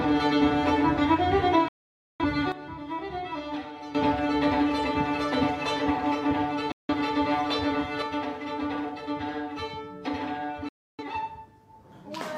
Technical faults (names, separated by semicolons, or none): digital broadcast dropout; sudden gain jump